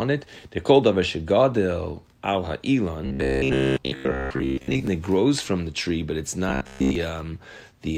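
From 3.06 to 4.87 s and again from 6.49 to 6.95 s, the speech becomes a rigid metallic buzz near 66.7 Hz: robotic sound, likely from repeated 15 ms buffers replacing most of the real audio.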